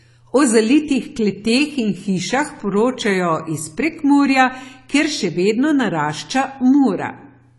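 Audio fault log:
throughout: AAC compression. The speech sounds dull and smeared, with nothing above 11.4 kHz and a warbling, fizzy texture on sibilants and held sounds, likely from AAC-LC at a low rate near 32 kbps. Unlike a plain low-pass filter, the damage also garbles what remains below the cut-off.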